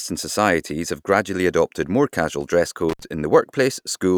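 From 2.89 to 3.04 s the speech is broken by an intermittent contact: a loose connection opens for about 62 ms, cutting the signal to faint hiss. Unlike a clean digital dropout, the gap is framed by crackle where the contact breaks and remakes.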